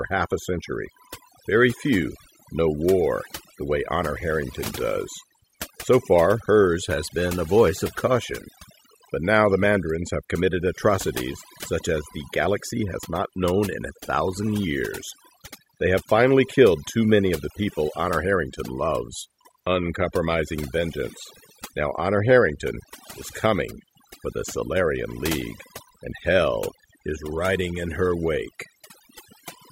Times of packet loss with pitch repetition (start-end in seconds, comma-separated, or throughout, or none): none